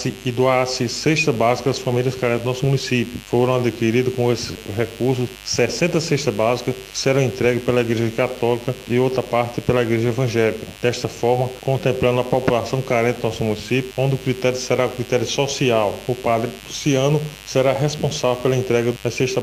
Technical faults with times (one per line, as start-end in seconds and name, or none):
0.00-19.43 mains buzz